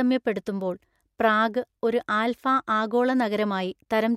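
Clock slip clicks run from 0.19 s to 4.10 s as faint, evenly spaced ticks about every tenth of a second, around forty in all, over the speech. Each is one sample dropped or repeated, likely from two unsynchronised clocks drifting roughly 200 ppm apart.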